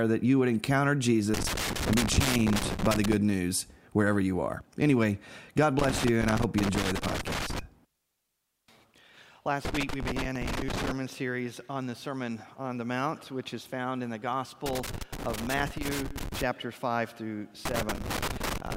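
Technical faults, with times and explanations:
1.34–3.14 s, 5.79–7.59 s, 9.65–10.91 s, 14.66–16.43 s and 17.65–18.75 s, loose connector crackle: a worn or dirty contact keeps losing and regaining connection as it shifts, chopping the signal into ragged fragments, heard as irregular bursts of scratchy crackle lasting one to two seconds each.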